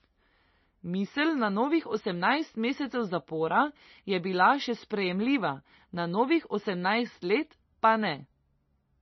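Throughout the speech, nothing is heard above 5.9 kHz. The sound is watery and swirly, with metallic chirps on s sounds. The likely cause is heavy MP3 compression, fitting a bitrate near 25 kbps. Short of bits, the encoder cuts treble and drops weak detail.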